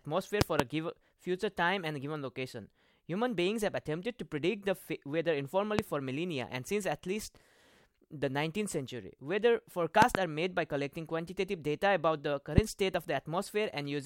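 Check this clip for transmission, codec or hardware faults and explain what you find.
Six loud pops cut through the speech. They fall at 0.41 to 0.62 s as a double pop, 5.79 to 5.81 s, 10.02 to 10.17 s as another double pop, and 12.58 to 12.60 s. Each is a sharp thump far louder than the speech, with the speech continuing underneath. The likely cause is a sudden voltage pulse from a plug, switch, static or driver glitch, which the circuits after it shape into a pop.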